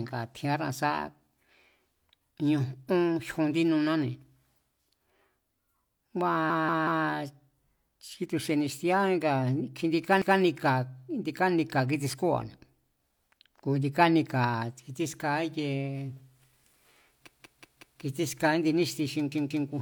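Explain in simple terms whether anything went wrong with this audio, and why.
The speech stutters four times, with a short chunk of about 0.19 s replaying with a hard join at 6.50–7.06, 10.22–10.40, 17.28–18.02 and 19.32–19.69 s. This is a repeated buffer: new audio arrived late, so the player replayed its last chunk, which fits an 8192-sample buffer.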